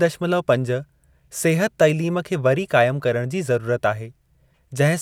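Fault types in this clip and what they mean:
No faults can be heard anywhere in this recording. There is nothing to point to as a defect in the sound.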